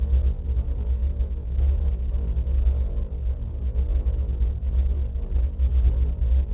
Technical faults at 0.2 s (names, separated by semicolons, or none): none